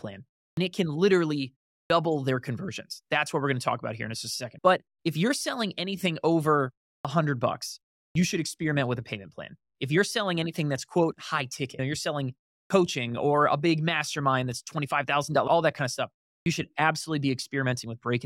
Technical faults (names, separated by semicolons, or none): clipped start after a pause